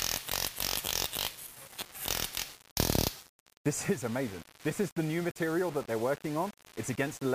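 A grainy, gritty distortion that tracks the sound runs throughout, likely low bit depth without dither, rounded to about 6 bits.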